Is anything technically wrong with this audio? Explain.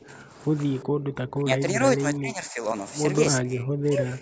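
Yes. The speech dips and drops out in four places, likely speech suppressed in double talk: an echo canceller muting its own talker while the far side spoke. There is a slight dip from 0.08 to 0.23 s, a deep cutout from 0.83 to 1.81 s, a moderate dip from 2.01 to 2.65 s, and a very deep cutout from 3.41 s to the end.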